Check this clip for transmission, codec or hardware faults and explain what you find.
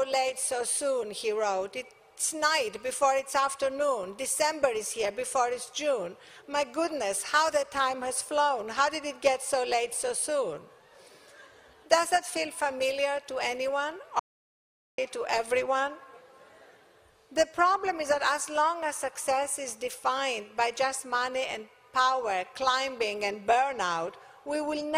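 One fault stands out: an audio dropout to silence from 14.19 to 14.98 s. The sound stops mid-flow and returns after about 0.79 s. The gap is silent, with no room tone or noise floor underneath. That points to the input itself going away rather than the sound getting quiet. The likely cause is a brief loss of the input, such as a link failure or momentary mute, while the recorder kept writing silence. Whatever was there during the gap is lost.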